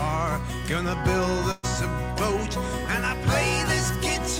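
At 1.51–1.65 s, a burst of packet loss drops 120 ms; the last sound is held and faded, appearing as smeared, decaying spectrogram bands.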